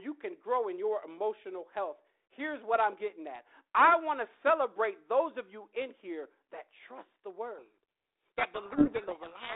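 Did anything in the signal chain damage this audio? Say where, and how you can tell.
Yes, at the codec stage. From 7.58 s to the end, at 9.56 s, the speech is buried in harsh distortion. This is a codec payload misread. The decoder reads the G.726 code words with their bits in the wrong order. Its adaptive prediction therefore goes wrong.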